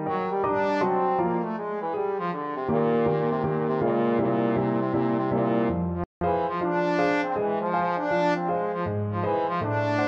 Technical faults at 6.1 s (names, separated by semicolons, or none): rebuffering stall